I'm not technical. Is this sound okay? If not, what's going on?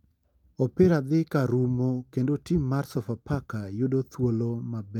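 No. There's clock drift between sender and receiver: the sending device's clock runs about 4% slow, so the receiver keeps running short of sound. It makes repeated timing corrections from 0.09 to 4.9 s, stretching the speech with small repeats that add about a fifth of a second. Unlike dropouts from lost data, these are tiny, evenly directed hiccups.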